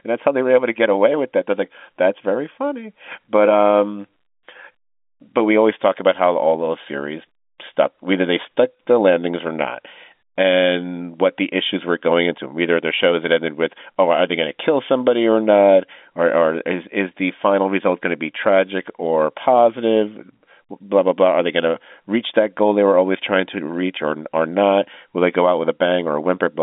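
Nothing in this speech recording is technically at fault. It carries the narrow sound of G.711 telephone coding, with the band running from about 200 Hz to 3.6 kHz and nothing above roughly 3.8 kHz.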